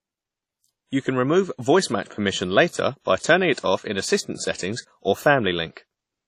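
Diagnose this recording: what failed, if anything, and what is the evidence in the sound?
The failure is at the codec stage: WMA compression, heavily applied across the whole speech clip. Speech carries a ringing, washy smear, with a hiss that rises and falls with the signal, and nothing above 16.3 kHz. The likely cause is a transform encoder working with long blocks at a low bitrate, consistent with about 32 kbps. Its quantisation noise spreads over tens of milliseconds around each sound, and weaker spectral lines are discarded outright.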